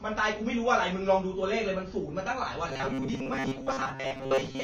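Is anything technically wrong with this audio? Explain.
Yes, the speech carries two faults. Throughout, it sounds like likely AAC compression at a low bitrate, around 24 kbps for AAC-LC. The encoder has lowered the cut-off, so the speech is dull and smeared, with a fizzy, warbling edge on sibilants where coarse quantisation and noise-filled bands replace real detail. A spectrogram shows a lowered ceiling and patchy, holed energy just below it.

From 2.69 s to the end, there is robotic sound from repeated short buffers, likely caused by audio arriving too seldom, so the playback loops a short stretch of roughly 7.5 ms instead of real signal. Most of that section is repeats. The looping imposes a fixed 134 Hz metallic buzz that loosely tracks the speech. On a spectrogram this appears as rigid, evenly spaced harmonics of 134 Hz, and the waveform shows identical short cycles repeating.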